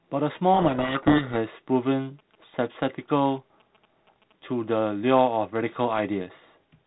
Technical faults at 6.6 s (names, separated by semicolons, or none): none